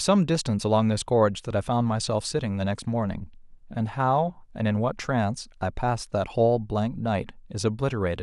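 No audible technical faults.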